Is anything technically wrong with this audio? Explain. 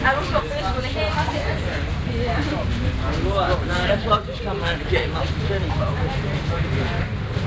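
No, nothing stood out on listening; the audio shows the expected signature of a G.722 call path at 64 kbps, with nothing above 8 kHz, and no fault could be heard.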